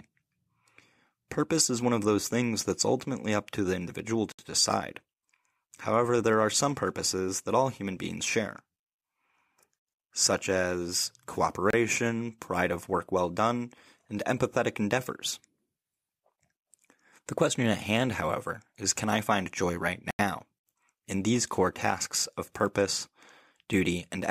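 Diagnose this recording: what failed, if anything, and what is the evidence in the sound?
The speech drops out three times, at 4.32 to 4.39 s (67 ms), 11.70 to 11.73 s (29 ms) and 20.11 to 20.19 s (84 ms). Each time the sound cuts abruptly to silence and then resumes. The likely cause is a Bluetooth stall on the playback link. Interference delayed packets, the headphones' buffer emptied, and output halted until retransmissions arrived. On a spectrogram each gap is a clean full-band vertical blank. The waveform goes flat with hard edges on both sides.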